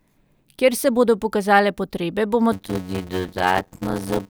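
From 2.52 s to the end of the clip at about 4.3 s, the speech shows a block size mismatch with padding. One stage hands over blocks shorter than the next stage expects, and the missing part of each block is filled with silence. A short gap lands in every block. This produces a steady buzz at 91.9 Hz. The speech also drags, running at 0.533 times normal speed. The pattern fits blocks of 256 samples being written.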